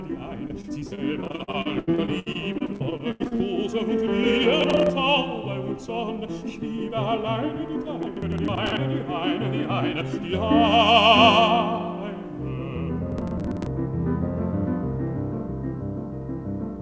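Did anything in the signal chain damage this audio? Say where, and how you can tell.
Yes. Network stage: repeated packet loss (robotic sound) from 0.48 to 3.41 s, with many short holes up to 86 ms patched by continuing the last sound, leaving choppy audio with pieces missing.

Driver or buffer stage: processor overload crackle at 4.61–4.90 s, 8.03–8.77 s and 13.12–13.66 s. Missed deadlines replay stale audio with hard edges, fitting roughly 30 ms buffers.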